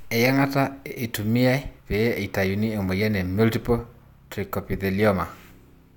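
No technical faults are audible.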